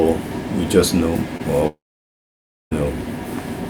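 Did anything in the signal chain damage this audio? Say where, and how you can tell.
Yes, both problems sit in the network stage. The first is a short concealed packet loss around 1.37 to 1.41 s. You hear a brief smear where the receiver stretched the preceding sound to cover a gap of roughly 20 ms. It then cross-faded back into the real signal.

The second, from 1.67 to 2.73 s, is most likely a long network dropout. The sound carries on for a moment as a fading continuation of what came just before. Then there's close to 0.94 s of silence, and the audio resumes further along. About 1.04 s of material never gets played, so the sound jumps ahead instead of picking up where it stopped. That skip is what separates this from a simple pause in the source.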